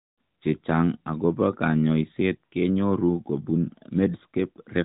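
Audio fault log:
No fault to log for this audio.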